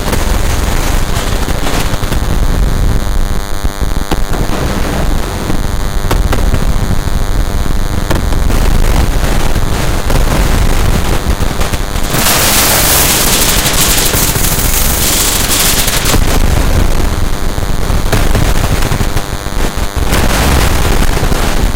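DECT cordless phone buzz runs through the whole of this everyday-sound recording: a thin, steady buzz pitched at 100 Hz and rich in harmonics, sitting roughly 15 dB below the wanted sound. It fits a nearby DECT handset or base station, whose radio transmits a short burst every 10 ms. Some part of the audio circuit rectifies that burst, turning the radio pulses into an audible 100 Hz pulse train. Hard clipping is also present from start to finish. The signal was driven about 15 dB beyond what the converter or gain stage could pass, so the peaks are sliced flat, and around 15% of all samples went over that limit. With overload this heavy, the flattened tops generate harmonics far up the spectrum, giving every loud moment a harsh, continuous fuzz rather than an occasional crackle.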